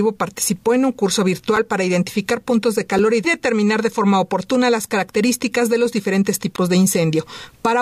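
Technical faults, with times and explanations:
1.56 s and 2.98 s: block of digital silence. About 5.8 ms drops to silence with no fade, which fits an unfilled 256-sample buffer. Each is heard as a tick or dip.
6.56–6.58 s: block of digital silence. A longer 21 ms run of silence cuts in and out abruptly. It leaves a short audible hole.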